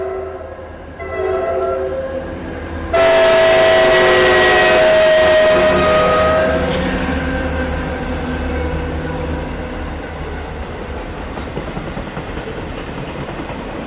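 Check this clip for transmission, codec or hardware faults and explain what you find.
Nothing faulty can be heard anywhere in this recording.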